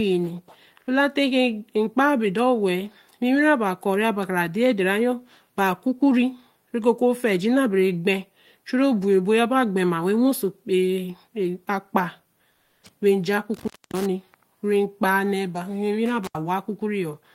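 From 12.55 to 12.79 s, the quiet background between phrases turns into a flat, featureless hiss for about a quarter of a second, roughly 6 dB lower than the real room sound around it, which sits about 43 dB below the loudest speech. This is comfort noise in place of the background, likely from discontinuous transmission: the sender's voice detector judged the pause silent and stopped sending, and the receiver filled the gap with synthetic noise shaped only loosely like the background.

At 13.54 s and again at 16.24 s, the speech drops out abruptly with a crackle at each edge, leaving only faint hiss. The first cutout holds for about 260 ms within the span ending at 14.06 s, and the second for about 77 ms within the span ending at 16.36 s. This is an intermittent contact: a loose plug or cable opening briefly, breaking the signal path until the connection closes again.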